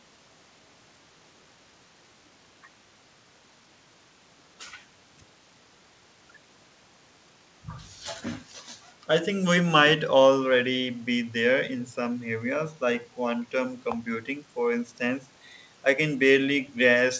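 Nothing in this speech recording points to a technical fault. It has passed through a WebRTC call path, and the lack of any content above 8 kHz fits a wideband codec such as G.722.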